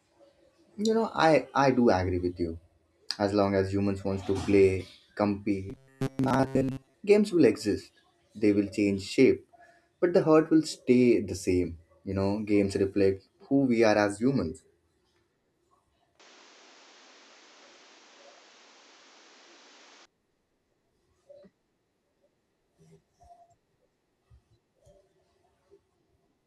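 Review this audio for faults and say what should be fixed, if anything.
From 5.70 to 6.94 s there's robotic sound from repeated short buffers: a stiff 134 Hz buzz, likely from audio arriving late and short buffers getting replayed.

From 16.20 to 20.05 s the input switched to a poorer device, likely mid-recording. The band narrows, the level shifts a few dB, and noise appears around 30 dB down, all without any gap.

To prevent both, give the capture path a bigger, steadier buffer and lock the input to one microphone for the whole session.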